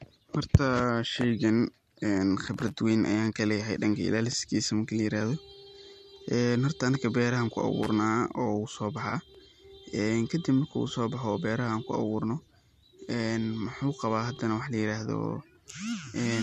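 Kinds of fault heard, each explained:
Loose connector crackle: An irregular burst of scratchy crackle at 2.54–2.72 s, just before "weyn ayaan kaleeyahay", and a shorter one at 7.83–7.89 s. A worn or dirty contact is making and breaking as it moves, chopping the signal.
Overlapping chunks: A brief stutter or click at 4.33–4.35 s, 9.35–9.37 s and 14.37–14.39 s, the last just before "wax layiraahdo". The audio was handled in 5-second chunks that each begin before the previous one ends, so about 21 ms plays twice at every join.
AAC frame loss with concealment: A short smeared or noisy patch at 9.10–9.13 s. About 20 ms of audio went missing, which fits two lost frames of the stream. The decoder patched the gap by reusing and scrambling the last good spectrum rather than leaving silence.
Low-delay AAC compression: The speech was likely coded with AAC-ELD, the low-delay AAC of video calls, at 64 kbps, and the coding damage is light.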